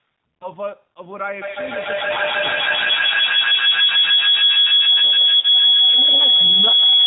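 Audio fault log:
Throughout: G.729 codec. The speech is carried at 8 kbit/s by a codec that rebuilds each 10 ms frame from a vocal tract filter, a pitch predictor and a few pulses, which gives it a plainly audible rough, synthetic edge. Unlike simple band-limiting, the damage is in the texture of the voice, not just its brightness. Nothing reaches above 4 kHz.
0.39 to 0.48 s and 5.40 to 5.45 s: VoIP packet loss concealed by the speech codec. About 20 ms and then 30 ms of audio went missing, which fits two and three lost frames. The decoder filled each gap by stretching the last pitch and filter into a brief buzzy tone or coloured noise that fades, instead of a clean dropout or click. The voice stays weak just after each gap because every new frame builds on the damaged one before it.
1.42 to 7.06 s: feedback howl. A loop between a microphone and a loudspeaker on the same call gains level on every trip, so a tone around 3 kHz grows instead of fading and reaches about 14 dB above the speech. 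The loop's delay is roughly 150 ms, and the howl runs to the end of the clip. Unlike an echo, the repeats get louder and narrower rather than dying away.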